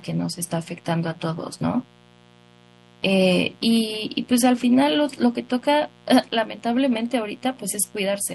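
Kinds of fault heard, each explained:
Mains buzz, throughout: sharp switching spikes from the 60 Hz supply leak into the signal twice per cycle, building harmonics of 60 Hz up into the kilohertz range, so a steady, raspy buzz sits beneath the speech, roughly 30 dB below it.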